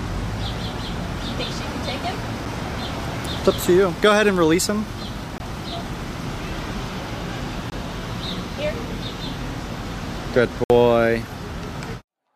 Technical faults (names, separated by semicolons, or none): block of digital silence